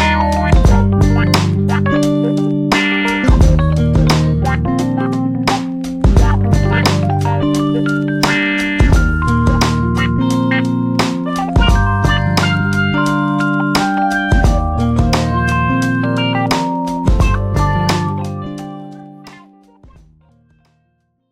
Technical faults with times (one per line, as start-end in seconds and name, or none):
none